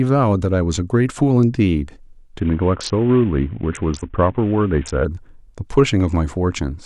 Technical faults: Bluetooth SBC bit pool drop

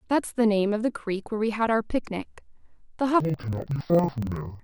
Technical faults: interleaved audio read as planar

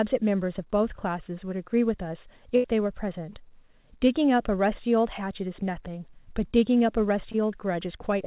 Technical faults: burst of packet loss; short concealed packet loss

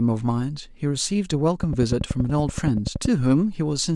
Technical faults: train of clicks

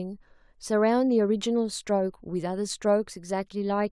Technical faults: none

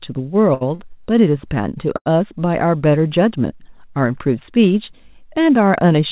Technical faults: short stall from a late packet

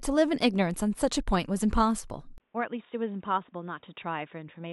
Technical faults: input switched to a poorer device

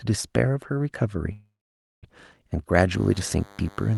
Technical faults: call audio freeze; DECT cordless phone buzz

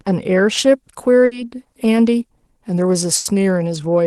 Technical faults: pre-emphasis left on; burst of packet loss

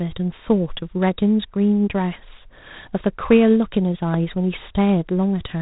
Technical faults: G.726 ADPCM; loud pop

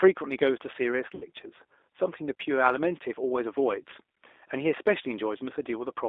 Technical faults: G.729 codec; VoIP packet loss concealed by the speech codec

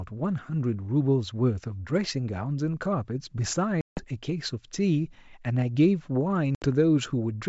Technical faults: packet loss on an ADPCM call

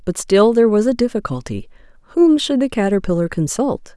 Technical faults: none

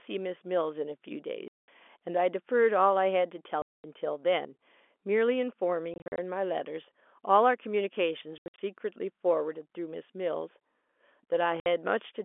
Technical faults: packet loss filled with silence

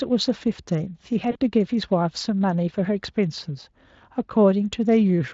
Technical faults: VoIP packet loss concealed by the speech codec

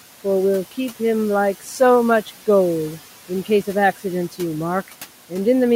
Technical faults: noise suppressor artifacts

